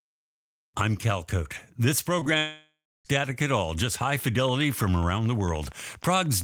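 At 2.19 s and again at 2.23 s, running through to 2.28 s, the speech briefly smears and wobbles. These are two back-to-back cases of short concealed packet loss. About 20 ms went missing each time, and the receiver covered each hole by extending the preceding sound before blending back.

From 2.38 s to 3.07 s, the speech dissolves into a fading buzz or hiss and then drops to silence for roughly the last 0.31 s. This is likely a long network dropout. About 0.68 s of audio never arrived, the receiver stretched the last sound until it ran out, and speech resumes with that stretch lost.

From 4.49 s to the end, a steady ticking runs over the speech and through the pauses, at a regular 12.9 clicks per second and roughly as loud as the speech itself. This train of clicks likely comes from interference or a faulty connection injecting repeated pulses.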